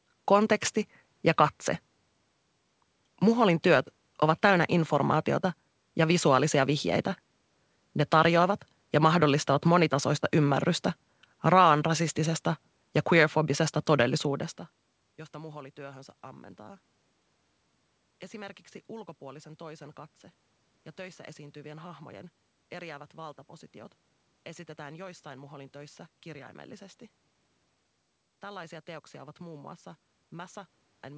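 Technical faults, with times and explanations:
No technical faults can be heard: the speech carries room noise, changes level around 14 s as the talker shifts relative to the microphone, and has no content above 8 kHz, consistent with a wideband call codec such as G.722 at 64 kbps.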